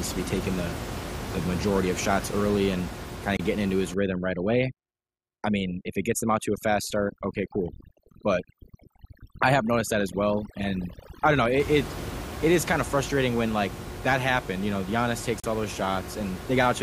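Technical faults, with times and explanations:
3.37–3.40 s and 15.40–15.44 s: gap between stream segments. The speech stops dead twice, for about 26 ms and then about 38 ms. Both holes have hard edges, with no fade in or out. Two segments were joined with timestamps that did not quite meet. The player filled the missing time with silence. Nothing is lost; the audio simply pauses and resumes. The pattern fits segments of about 6 seconds.
3.94–11.60 s: overdone noise removal. For about seven and a half seconds the room noise, sitting about 11 dB below the speech, is set upon by a noise reducer pushed too hard. It cuts single frequency bands whenever they sit near its guess of the noise. Quiet parts of the speech fall below that line and vanish too. The background drops and breaks up into twinkling, warbling specks.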